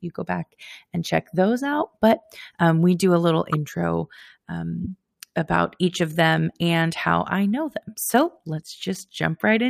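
Speech clip with corrupt frames decoded at two points: a louder glitch at 3.53–3.57 s after "we do a little", about 3 frames long, and a fainter one at 4.84–4.87 s before "about each of them", about 2 frames long. Flipped bits misplaced spectral energy, which produces audible bursts rather than the silence of a dropout.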